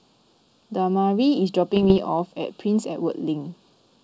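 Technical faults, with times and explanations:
Throughout: channel delay (comb filtering). One side of the signal sits a few samples behind the other, only around 0.3 ms, and once the two are folded to mono, whatever they share cancels at evenly spaced frequencies. With a delay that short, the first notch lands somewhere near 2 kHz and the rest climb from there, so the speech comes across hollow and slightly phasey. Those dips never move for the whole clip, which is the giveaway.
1.76 to 1.98 s: bit errors on an ADPCM link. For about a fifth of a second you get pops and a rough, gritty burst with the level jumping around. A stray bit in ADPCM doesn't just spoil one sample. It throws off the decoder's step size and its predictor, so each hit keeps ringing for a few milliseconds until the decoder recovers. The density sounds like a small fraction of a percent of bits flipped. Outside that burst, the G.722 wideband coding sounds clean, which fits the full 64 kbit/s mode.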